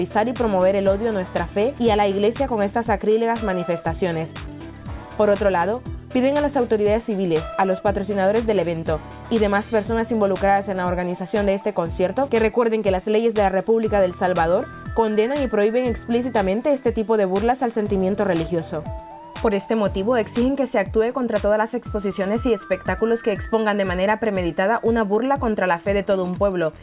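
No technical faults can be heard anywhere in this clip.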